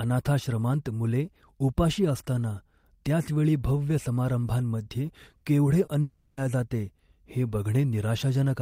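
At 5.85 to 5.89 s there is a short concealed packet loss. About 20 ms of speech never arrived in time, and the receiver bridged the hole by extending the preceding sound before blending back into the real signal. It comes across as a brief smear or wobble rather than a gap. The hole is only a single short slice, and the speech resumes almost immediately, which is what separates it from a true dropout.

From 6.01 to 6.39 s the speech gives way to an artificial continuation lasting about 360 ms. The last sound is stretched into a buzzy, hissy fill that carries on across the whole stretch without falling to silence, and the real speech then returns with that portion missing. This is likely a long network dropout, with nothing arriving for several tenths of a second. Its length and the extended, fading fill set it apart from the brief packet-loss blip just before it.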